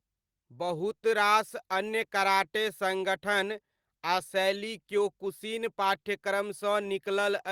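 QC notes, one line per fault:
No faults found in this speech recording. Nothing here calls for a QC entry.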